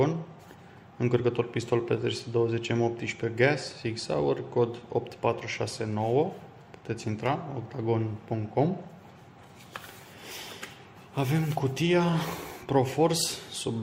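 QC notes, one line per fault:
No faults found on this pass.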